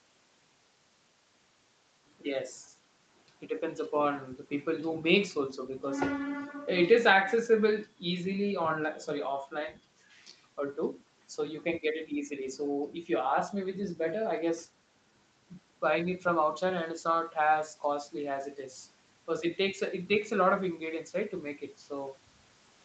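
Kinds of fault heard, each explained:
Nothing here counts as a fault: the speech fades in smoothly at about 2 s, and the call processing and Opus coding leave nothing heard above 8 kHz, which is just how this path behaves.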